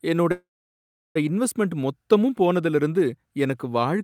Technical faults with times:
0.31-1.17 call audio freeze

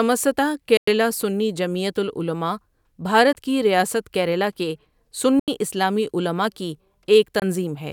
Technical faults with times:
0.77-0.88 Bluetooth dropout
3.33-3.35 Bluetooth dropout
5.39-5.48 Bluetooth dropout
7.40-7.42 Bluetooth dropout

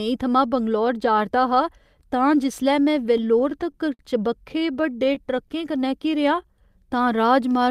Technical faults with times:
3.17-4.01 repeated stalls (stutter)
4.49-5.51 repeated stalls (stutter)
5.36-7.21 jitter buffer slow-down

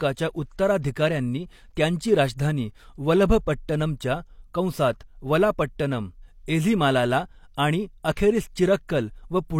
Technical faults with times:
8.03-8.17 pre-echo
8.88 pre-echo

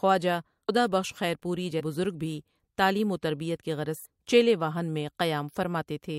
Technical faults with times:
0.68 compressed frames skipped
1.79-1.81 compressed frames skipped
4.04 compressed frames skipped

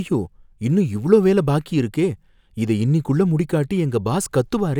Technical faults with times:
none

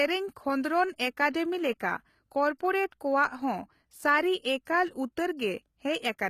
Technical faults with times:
0.00-6.30 HE-AAC compression
1.31-1.34 pre-echo
4.65 pre-echo

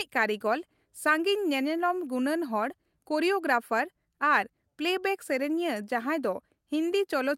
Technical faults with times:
none

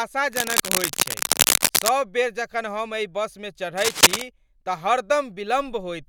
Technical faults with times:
0.32-1.90 cable scratch noise
3.77-4.22 cable scratch noise

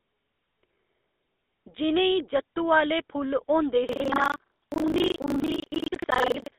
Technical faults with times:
0.00-6.58 GSM full-rate codec
3.88-6.58 buffer tearing

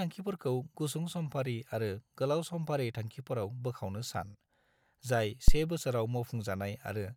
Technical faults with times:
5.48-5.59 phantom power thump

